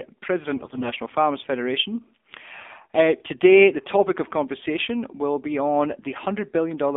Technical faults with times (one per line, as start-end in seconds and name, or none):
0.00-6.97 AMR narrowband mobile codec
0.56-0.91 AMR bit errors